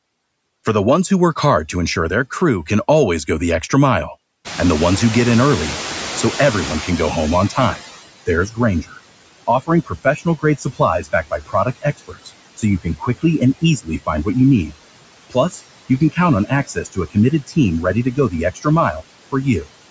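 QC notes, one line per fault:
Throughout: noise suppressor artifacts. The suppressor is pulling the background down by about 21 dB frame by frame, so the noise sinks in the gaps and creeps back under the speech.
4.44 to 8.01 s: noise suppressor catching up. The room noise jumps by about 21 dB around 4.5 s, and the noise estimate lags. The louder background comes through with less reduction at first, then fades over roughly 3.6 s as the suppressor adapts and gets it down by about 18 dB.
7.5 to 7.82 s, 8.26 to 8.99 s, 9.47 to 14.27 s and 15.3 to 19.67 s: speech cut by the noise suppressor. With the noise now only about 15 dB under the speech, the suppressor mistakes quieter speech for background. Soft consonants and word endings get swallowed, with dips of about 13, 16, 20 and 19 dB. The longer runs lose more, around a second or more each.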